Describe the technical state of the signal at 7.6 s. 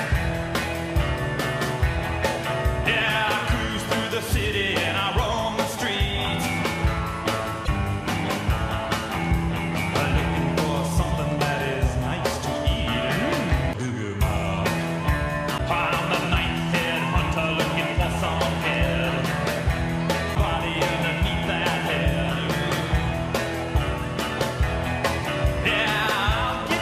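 Damaged data in the compressed stream at 7.64 to 7.69 s: corrupted frames throw the decoder out of sync, producing a brief glitch while it resynchronises.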